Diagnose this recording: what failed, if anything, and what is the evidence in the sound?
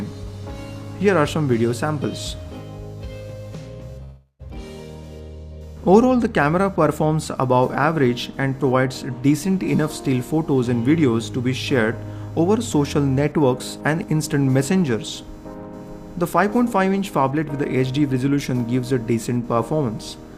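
Computer activity noise sits in the analogue wiring and grounding for the whole clip. A faint buzzing at a pulse rate of around 500 Hz, roughly 35 dB below the sound, rises and falls with machine load rather than with the audio. On a spectrogram it appears as evenly spaced horizontal harmonic lines flickering independently of the content. The computer's load currents are modulating the shared audio ground.

From 4.03 to 4.42 s there is a long network dropout, likely from packets arriving too late or not at all. The receiver stretches the last sound into a fading buzz, then falls to about 0.1 s of silence before audio resumes with roughly 0.36 s missing. The waveform shows a decaying envelope, a flat line, then an abrupt restart.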